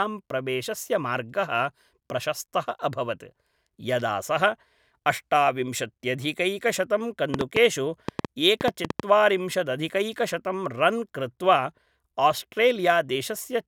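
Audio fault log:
7.34–9.01 s, train of clicks: around ten matching sharp ticks, unevenly spaced at about six per second and roughly 15 dB above the speech, likely from electrical interference.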